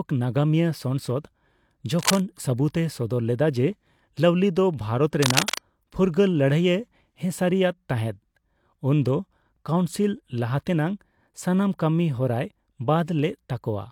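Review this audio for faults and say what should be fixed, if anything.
Two bursts of cable scratch noise break into the speech, from 1.99 to 2.22 s and again from 5.22 to 5.66 s. Each is a dense, uneven scratching sitting only a few dB under the speech. The likely cause is a worn cable, connector or control carrying DC being moved, so its contact resistance jumps around and spits noise into the signal. To prevent it, swap or clean the suspect cable and connectors and keep them still while recording.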